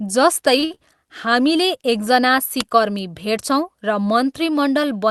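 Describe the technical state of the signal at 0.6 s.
A short stall from a late packet runs from 0.59 to 0.64 s, followed immediately by a second from 0.64 to 0.72 s. Each time the jitter buffer ran dry and stretched the last sound, by about 31 ms and then 60 ms, so the sound hangs with a faint buzz or dip before resuming without loss.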